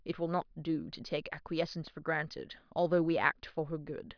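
Nothing technical stands out in this short bit of speech; there's no fault to point to anywhere in it.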